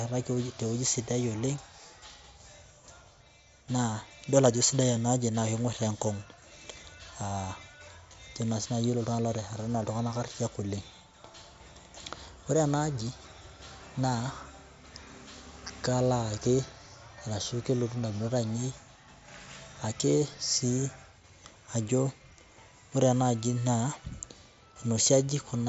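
No technical faults turn up in this speech, which comes through a wideband Bluetooth mSBC headset link whose band limit leaves nothing above about 7.7 kHz.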